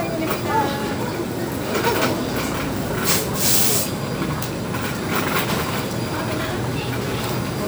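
No technical faults can be heard anywhere in this recording of sounds. Nothing in it needs a timestamp or a fix.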